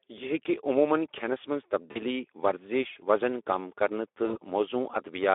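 It's a short speech recording squeezed through the Speex codec the whole way, and you can plainly hear it. The sound has that hoarse, grainy CELP texture, where the excitation is starved of bits and the voice turns rough and a bit synthetic. The degradation suggests a fairly low setting, around 11 kbps. The band sits in a telephone-style window of roughly 300 Hz to 3.6 kHz, so there's no real top end at all. There are also two spots of VoIP packet loss concealed by the speech codec: from 1.92 to 2.02 s and from 4.25 to 4.38 s. Each time about 40 ms of audio went missing, which fits a couple of 20 ms frames. The decoder papered over the gap by extending the last pitch and filter shape, so you get a brief buzzy or noisy smear that fades. Because each frame builds on the previous one, the sound stays weak and off-colour a little past the gap before it recovers.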